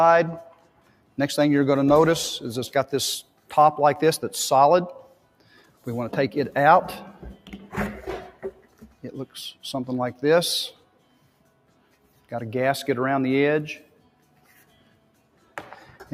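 From the start, a noise suppressor applied to music or sounds treats steady material as noise, so the level swings by a few decibels as sustained parts sink and attacks pass. The waveform envelope pumps, and on a spectrogram held bands flicker and thin.

The sound is cut by the noise suppressor at 0.46–1.18, 3.23–3.52, 5.02–5.86, 7.13–7.67, 8.29–9.07, 10.72–12.31, 13.83–15.56 and 15.87–16.14 s, dropping about 12 dB (about 11 dB at 7.13 and about 9 dB at the end). Sustains and decays collapse, showing as waveform troughs and darkened spectrogram stretches.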